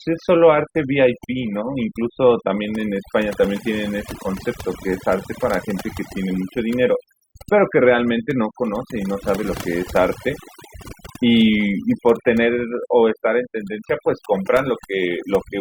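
From start to finish, overdone noise removal: the noise reduction was set far too aggressively, cutting individual frequency bands whenever they came near its noise estimate and taking the softer parts of the speech with them. The background drops and breaks up into twinkling specks.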